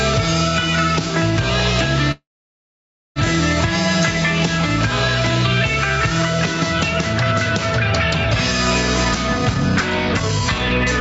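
Throughout the clip the level breathes. The background rises in the quiet gaps and drops each time a loud sound arrives, with a swing of about 5 dB, and loud and soft passages sit closer together than they should. This is gain pumping, likely caused by input gain set far too high for the microphone, with a fast limiter or compressor pulling the level down on every peak and releasing it in between. The result sounds squashed.

From 2.11 s to 3.19 s there is a call audio freeze. The last sound is briefly drawn out, then the audio goes silent for about 0.94 s before resuming exactly where it stopped. Nothing is lost, but roughly 1.04 s of delay is inserted. This fits delivery stalling on the way so that the receiver's jitter buffer ran dry and had to fill the gap, the likely cause here.

From 9.05 s to the end at 11.00 s a jitter buffer speed-up takes over. With more audio queued than the buffer targets, the receiver repeatedly cuts out short pitch-period-length slices, around 0.3 s in total. 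Playback runs at about 115% speed with the pitch unchanged, so this stretch sounds hurried and compressed in time. Throughout, the call path's band limit leaves nothing above 8 kHz, which is normal for this route.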